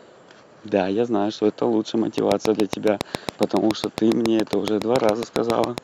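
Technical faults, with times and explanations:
2.18–5.79 s, train of clicks: a regular ticking of about 7.2 clicks per second, some thirty in all, each of much the same shape and standing about 20 dB above the speech, audible through pauses as well. Evenly paced near-identical pulses point to a repeating external source, likely interference from nearby equipment or a faulty connection or power supply. On a spectrogram they appear as evenly spaced thin vertical broadband lines; on the waveform, as sharp narrow spikes towering over the speech envelope.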